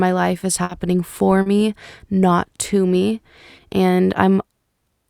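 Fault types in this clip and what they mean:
burst of packet loss: Around 0.63 to 0.72 s a run of packets went missing, so the decoder stretched the last sound for about 60 ms and faded it, then the audio jumps ahead with roughly 40 ms gone. Playback timing also shifts by about 20 ms there.
short concealed packet loss: At about 1.42 to 1.49 s roughly 40 ms never arrived in time, and the receiver papered over it by carrying the previous sound forward before blending back, leaving a brief smear or wobble in the speech.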